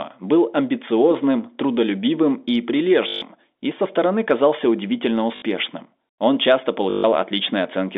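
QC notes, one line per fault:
3.08 to 3.22 s, 5.36 to 5.42 s and 6.90 to 7.04 s, packet loss with last packet repeated: gaps of 140 ms after "был амбициозным трудолюбивым и", 60 ms after "со стороны казался удивительно", and 140 ms near the end are each filled by replaying the last received packet. The replays seldom line up with the pitch. Across each run the repeats form a robotic stutter buzzing near 50 Hz, which fits 20 ms packets. This stutter sits on top of the narrow telephone band of the line.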